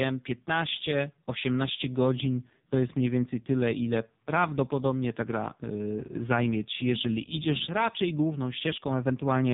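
Speech carrying the AMR narrowband mobile codec throughout, heavily damaged: buzzy, synthetic-sounding, pointing to a very low AMR-NB mode near 5 kbps. A spectrogram shows a hard ceiling at 3.8 kHz with nothing above it, and smeared, blocky formant detail below.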